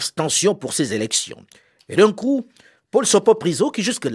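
No technical faults can be heard anywhere in this speech recording. There is nothing in it to mark or describe.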